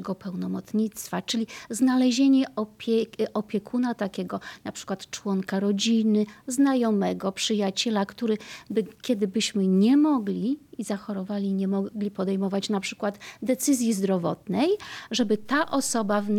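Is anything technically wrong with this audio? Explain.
Yes. At 15.21 s a DC step occurs: the waveform's zero line jumps by about -40 dBFS and holds to the end, heard as a single low thump.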